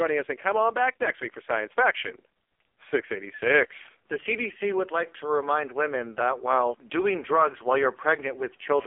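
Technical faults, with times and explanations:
throughout, AMR narrowband mobile codec: thin, buzzy, synthetic speech confined to 300 Hz to 3.4 kHz, because heavy low-rate coding, fitting roughly 5 kbps, rebuilds the voice from sparse pulses.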